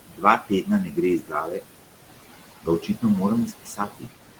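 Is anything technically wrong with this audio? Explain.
Yes. Noise suppressor artifacts run through the whole clip. The suppressor pulls down bands it judges to be steady noise, cutting the background by about 17 dB. It works frame by frame, so the room noise, which sits about 12 dB under the speech, dips in the gaps and comes back under the talking.

Speech cut by the noise suppressor occurs five times. The suppressor mistakes quiet speech for noise and turns it down with the background. From 0.0 to 0.69 s, speech drops by up to about 18 dB. From 0.85 to 0.98 s, just before "gre iz", it drops by about 11 dB. From 1.19 to 1.65 s, right after "gre iz", it drops by about 17 dB. From 2.63 to 3.03 s, the drop is about 15 dB. From 3.47 to 4.13 s, it is about 17 dB. Soft sounds and endings there come out faint and swallowed.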